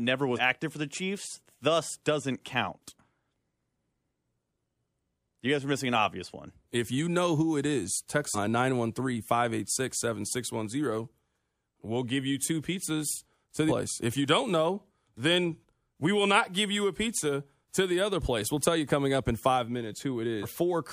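Compressed frames skipped in this speech recording: whole frames were left out, so the audio jumps ahead, after "who it is text" at 8.34 to 8.38 s (about 100 ms lost) and after "you two pizzas to" at 13.68 to 13.72 s (about 300 ms lost), consistent with 46.4 ms frames.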